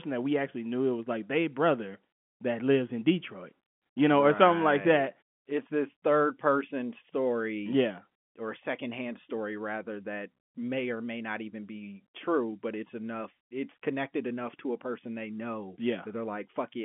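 The clip is speech, and nothing is technically wrong with it.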